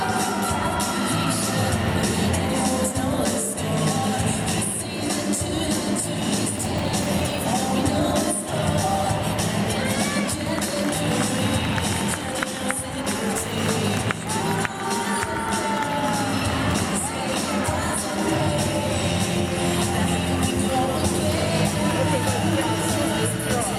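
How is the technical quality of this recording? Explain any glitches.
The recording has one clear glitch, a processor overload crackle from 6.55 to 7.39 s. For those 0.84 seconds the system could not finish its very short audio buffers, each well under a millisecond, on time, and dozens of deadlines slipped in a row. Each miss left a tiny gap of silence with hard edges, so the sound is overlaid with a gritty, tearing crackle that stops once the load passes. A single dropout would leave one clean hole, and clipping would track loud peaks. This crackle instead arrives as a dense spray of tiny breaks regardless of level.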